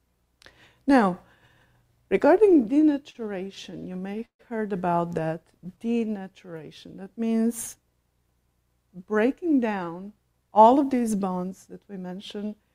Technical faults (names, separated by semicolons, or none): repeated stalls (stutter); jitter buffer slow-down; jitter buffer speed-up